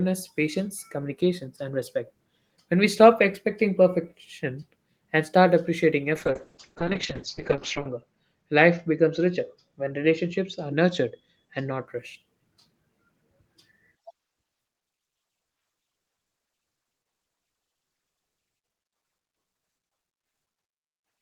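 From 6.16 s to 11.93 s there is a call bitrate drop. The encoder was starved of bits, with a fall that points to something like 32 kbps down to about 7 kbps, and the speech turns rough and watery. The audio band shrinks from 20 kHz to 8 kHz, so it also sounds muffled, worst for about 1.7 s at the bottom. On a spectrogram, energy above 8 kHz vanishes under a flat ceiling until quality returns.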